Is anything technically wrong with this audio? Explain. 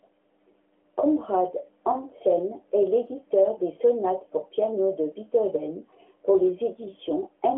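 No technical faults are present.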